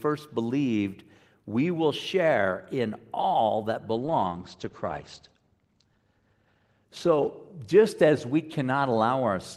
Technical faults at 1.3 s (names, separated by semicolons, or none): none